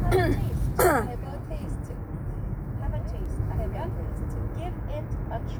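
A single bit error spike at 3.26 s in this sound recording gives one sharp broadband tick. It shows as a one-sample needle on the waveform, peaking at about -28 dBFS, and a thin vertical line on the spectrogram.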